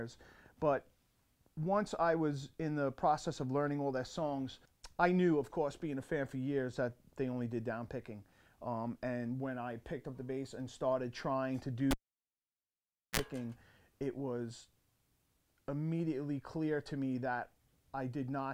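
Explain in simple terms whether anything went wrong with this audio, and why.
At 11.91 s a cable was pulled and plugged in while the sound was live. A pop marks the moment it comes out, followed by about 1.24 s of near silence with nothing connected. As the plug goes back in, only its tip touches at first, which lets in a 41 ms burst of 60 Hz mains buzz. A second pop at 13.2 s marks full contact, and the sound returns.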